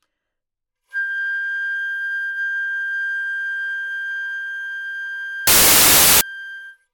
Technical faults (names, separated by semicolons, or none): samples built from the wrong bytes